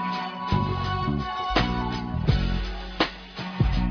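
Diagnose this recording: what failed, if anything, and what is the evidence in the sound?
Nothing stood out on listening that would point to a failure at any stage of the chain.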